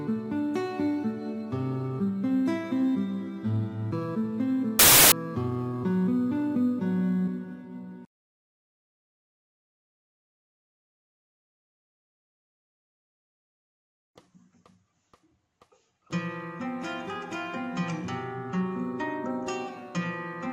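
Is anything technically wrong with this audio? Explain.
Yes, there's one problem. From about 4.79 to 5.12 s the samples are built from the wrong bytes: the reader misassembles each sample's bytes, so the fast-changing low bits end up as the big part of the value, and the audio turns into broadband noise for that third of a second.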